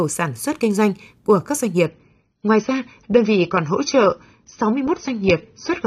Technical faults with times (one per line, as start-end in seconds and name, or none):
1.86-5.86 adaptive stream at a lower bitrate